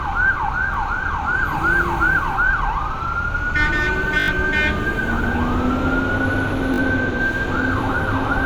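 Three times the playback device ran out of fresh audio and replayed its last buffer, each repeat lasting about 20 ms, which fits a 20 ms buffer. At 0.74 to 0.76 s one extra play gives a quick click. At 4.2 to 4.28 s four extra plays form a brief buzzing stutter with roughly 70 ms of sound lost. At 6.74 to 6.78 s two extra plays leave a shorter rattle. Each repeat meets the next with a hard join.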